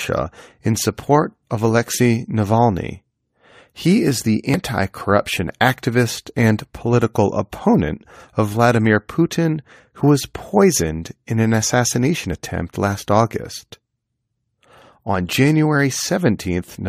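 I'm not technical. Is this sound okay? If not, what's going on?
No, there's one glitch. At about 4.54 s, right after "is the" and just before "corruption activist and political", you'll hear a quick chirp or blip. That's damaged data in a compressed stream: a tiny piece of the file got scrambled, so the player couldn't read that bit, lost its place, and hunted for the next clean chunk. It lasts only a split second.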